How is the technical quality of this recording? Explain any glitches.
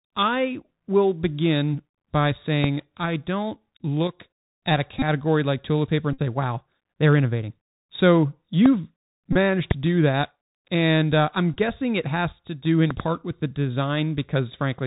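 The recording has clear technical problems: a narrowband headset sound throughout, several sharp pops, and short buzzy dropouts.

Throughout, the speech sounds dull and boxed-in, with scratchy s sounds and a granular hiss underneath. This is the Bluetooth CVSD headset codec: it passes nothing above 4 kHz, and its one-bit adaptive steps can't keep up with loud, bright sounds.

At 2.64, 8.66 and 9.71 s (just before "to do that") a single sharp pop jumps out, roughly 20 dB above the speech. At 12.91 to 13.02 s, before "with the", there is a double pop. The speech continues underneath. These are loud pops, likely from a sudden voltage spike such as static or a connection glitch.

At 4.99 s (30 ms), 6.13 s (49 ms), 9.33 s (26 ms) and 11.54 s (19 ms, right after "uh I'm") the sound turns into a brief buzz near 267 Hz. These are Bluetooth headset packet repeats: lost packets were replaced by replaying the previous 3.75 ms packet.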